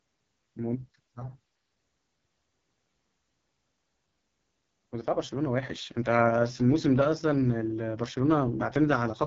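Throughout, the speech carries AMR wideband (HD Voice) codec damage: rough, raspy texture pointing to its lowest rate, near 6.6 kbit/s, with nothing above 7.5 kHz, unlike narrowband's duller ceiling.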